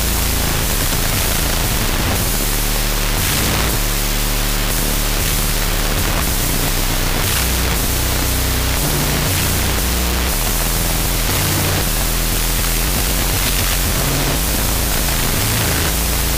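Loud, hissy noise fills the whole clip, with the original sound buried beneath it, running at half speed and an octave low. This is a wrong sample width fault: audio written as 16-bit integers is read as unsigned 8-bit. Every real sample splits into two values, so the playback takes twice as long. The low bytes turn into noise, and only the high bytes carry a rough trace of the signal.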